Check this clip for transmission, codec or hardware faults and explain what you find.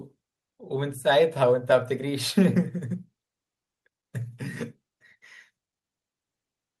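Nothing faulty can be heard anywhere in this speech recording. There is no event at any point that calls for explanation.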